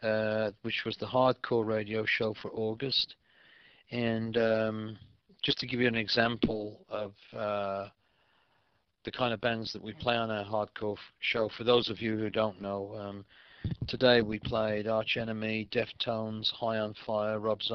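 No technical faults are audible anywhere in the audio.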